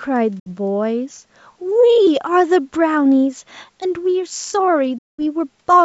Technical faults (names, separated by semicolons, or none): Bluetooth dropout